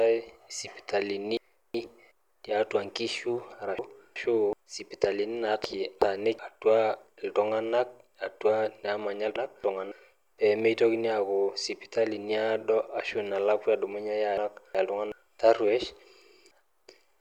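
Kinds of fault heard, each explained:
Frames out of order: Two neighbouring runs of frames swap places, so a short stretch of speech plays with its halves reversed. This happens six times, at 1.37, 3.79, 5.64, 9.36, 14.38 and 16.51 s. The first ends just before "tiatua nkishu", and the second begins right after it. Each sounds like a garbled flutter. Each swapped half lasts about 0.37 s, or 0.28 s at 9.36 s. No time is lost.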